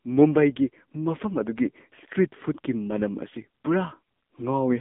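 Throughout, AMR narrowband mobile codec damage: nothing above 3.8 kHz, and a heavy buzzy, synthetic texture fitting a low mode near 6.7 kbps, unlike simple muffled band-limiting.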